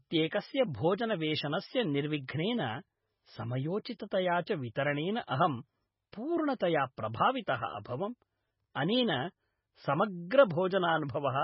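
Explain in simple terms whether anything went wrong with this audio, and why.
Throughout the speech, the sound is heavily damaged by squeezing it into a small file. Nothing comes through above 5.6 kHz, so it sounds dull. Weak details drop in and out, giving a watery sound. The likely cause is MP3 compression.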